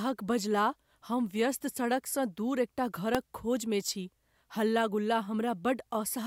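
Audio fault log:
3.15 s, electrical switching spike: a single sharp snap, peaking near -10 dBFS, laid over the speech, likely a nearby switch arcing into the audio line.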